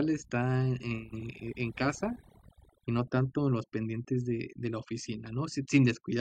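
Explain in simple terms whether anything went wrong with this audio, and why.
Throughout the clip, the speech sits over a background that drops away and breaks up into twinkling specks, the mark of overdone noise removal that cut away quiet parts of the voice along with the noise.

From 1.16 to 1.22 seconds there is a brief glitch, caused by damaged data in a compressed stream that the decoder misread before finding its place again.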